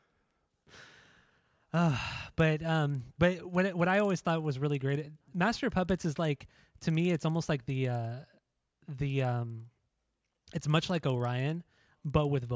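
Resampler restarted on every block, throughout: each 50 ms block was converted in isolation, likely from 48 kHz down to 16 kHz, so every block edge carries a small discontinuity. The result is a tick repeating at 20 Hz, heard only while the speech is sounding.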